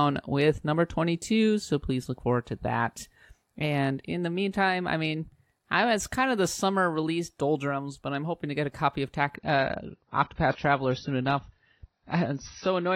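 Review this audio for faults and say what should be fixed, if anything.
From 9.36 s to the end there's an adaptive stream at a lower bitrate. The player dropped to a leaner rendition when the connection slowed, so the treble cuts off at 6 kHz and codec artefacts thicken, which fits a switch from about 96 to 24 kbit/s AAC. A bigger playback buffer or pinning the top rendition while capturing would avoid it.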